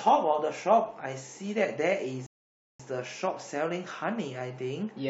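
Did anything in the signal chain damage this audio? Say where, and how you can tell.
Yes, at the playback stage: a rebuffering stall from 2.26 to 2.80 s. The speech drops to dead silence for about 0.53 s, then picks up exactly where it left off with nothing missing. The player ran dry of downloaded audio and waited for more, adding time.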